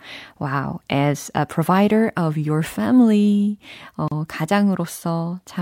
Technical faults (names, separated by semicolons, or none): gap at a join of encoded pieces